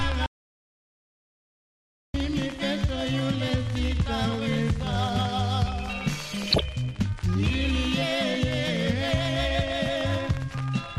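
The audio is dull throughout, with a gurgling, granular edge. Upper frequencies thin out and flicker. This is MP2 compression, likely at a low rate that fits about 80 kbps. Too few bits leave upper sub-bands switched off and the rest coarsely quantised. From 0.26 to 2.14 s there is an audio dropout to silence. For about 1.88 s the signal falls to silence, with no room tone. The input was likely lost while recording continued, so that stretch is gone. From 6.27 to 6.61 s, DAB burbling appears. Short blips of noise sit over the sound. Bit errors, at a rate of roughly 0.7 percent, slipped past error correction into the MP2 data. Wrong samples put brief noise blips into single sub-bands across 14 frames.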